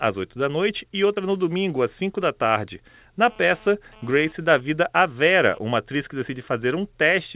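Short concealed packet loss hits this speech recording at 1.14 to 1.18 s, between "da noite e" and "no domingo às". About 20 ms of audio never arrived in time, so the receiver extended the preceding sound across the gap and crossfaded back into the real signal. The result is a brief smear or wobble in the phrase. GSM phone buzz follows from 3.22 to 5.59 s, starting after "da tarde" and ending before "uma atriz que". A nearby 2G handset transmitting data in bursts at about 217 Hz had its radio pulses rectified by the audio circuitry. This produces a hard, raspy buzz rich in harmonics, at about 25 dB below the speech, that comes and goes with the transfer. The narrowband call path, which fits G.711 at 64 kbps, leaves nothing above 4 kHz, so both faults sit within a band-limited telephone sound.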